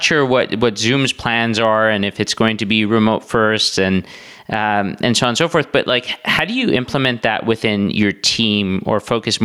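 Gain pumping runs through the whole speech clip, likely from input gain set far too high with a fast limiter clamping down on each loud syllable. The gain swings around 10 dB, leaving the delivery squashed.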